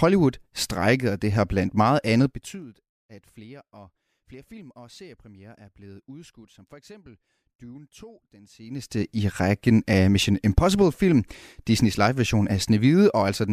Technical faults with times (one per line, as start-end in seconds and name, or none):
2.26-2.65 zipper noise
8.55-9.07 zipper noise